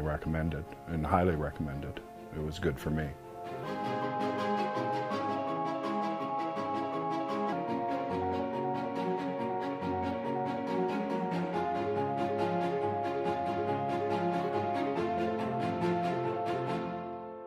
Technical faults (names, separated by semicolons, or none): section at the wrong speed